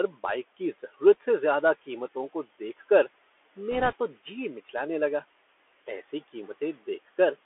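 Throughout, the speech sounds narrow and muffled, with scratchy s sounds and a granular hiss beneath it. This is the Bluetooth CVSD headset codec, passing only about 300 Hz to 3.4 kHz, which fits a 64 kb/s one-bit stream. The faint room noise sits about 22 dB below the speech.

From 3.72 to 3.94 s, a rushing, crackly noise without sharp clicks rides over the speech. These are bit errors on the Bluetooth voice link, at a rate of roughly one or two percent.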